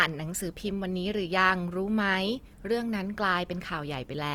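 Throughout the speech, Opus compression is plainly audible, likely at a low bitrate near 24 kbps. Starved bands are noise-filled, so tones sound grainy and rough. Bandwidth still reaches about 20.2 kHz.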